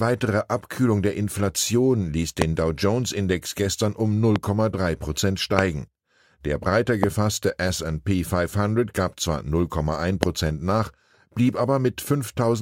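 Loud pops hit at 2.42–2.44, 4.36–4.38 (just after "gestern um"), 5.59–5.61, 7.04–7.06 and 10.23–10.25 s (just before "nach blieb"). Each is a single sharp thump about 20 dB above the speech, likely a voltage pulse from a switch, plug or static discharge. Unlike a dropout click, the speech carries on unbroken beneath each one.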